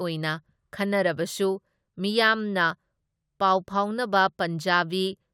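No technical faults are audible.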